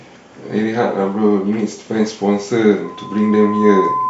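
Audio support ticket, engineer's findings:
Pure tone swelling into a squeal from 2.85 s to end of clip; 1 kHz, builds over about a second to roughly speech level. Loudspeaker feedback squeal: mic picking up its own speaker, loop gain above unity at 1 kHz.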